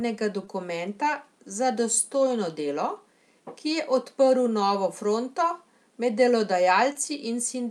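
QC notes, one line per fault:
0.45–0.49 s and 6.93–6.97 s: short concealed packet loss. Each is a brief smear or wobble. Roughly 20 ms of audio, consistent with one lost packet, missed the decoder. The receiver extended the preceding sound to cover the gap, then blended back.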